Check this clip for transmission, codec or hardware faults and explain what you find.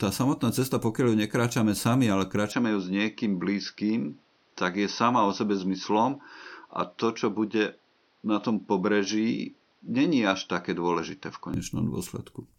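One fault stands out. From 2.52 s to 11.54 s the recording likely switched its input to a poorer device, one with a narrower passband. Nothing reaches above 6.1 kHz, so the speech turns duller and boxier, with a faint new noise floor roughly 40 dB down. There is no gap at the switch, and the level stays about the same.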